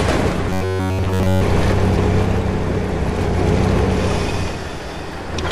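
From 0.50 to 1.41 s the sound collapses into robotic sound from repeated short buffers: a rigid, metallic buzz pitched at 93.8 Hz that still loosely tracks the underlying audio. The likely cause is input arriving too late, so the same 10.7 ms slice is replayed for most of that stretch while the real material is skipped. Unlike mains hum, the buzz replaces the audio rather than sitting beneath it, and unlike stutter, no audible chunk repeats.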